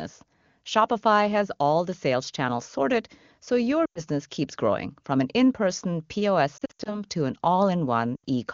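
Lost AMR speech frames occur three times: radio errors corrupted frames, so the decoder kept repeating its last good pitch and vocal tract settings at falling gain. From 3.86 to 4.01 s, after "channels sorted so your", 100 ms drops to near silence before "keeps growing from an". From 6.57 to 7.00 s, losses scattered over 280 ms, in runs of up to 80 ms, warble before "to an". From 8.16 to 8.24 s, 80 ms drops to near silence, and the clear wideband sound returns briefly rough.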